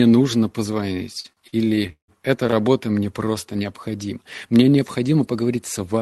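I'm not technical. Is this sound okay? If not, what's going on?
No. There are repeated stalls (stutter) from 1.13 to 2.64 s. The data carrying the speech arrived late, so playback kept running dry. Each time, the last sound was stretched to fill the pause, the longest by 0.16 s, so the speech drags and stutters.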